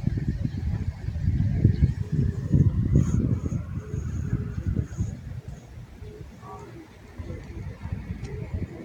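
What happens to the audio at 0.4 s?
Nothing goes wrong at 0.4 s: the audio plays through that moment intact, with no dropout, click, distortion or other fault.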